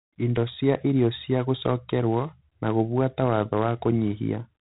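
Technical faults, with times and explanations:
Throughout, G.726 ADPCM: the speech carries a harsh, rasping hiss that rises and falls with its level, and nothing passes above 3.8 kHz. Coding each sample as a few bits of difference from a predicted value leaves coarse steps, which fits the 24 kbit/s mode.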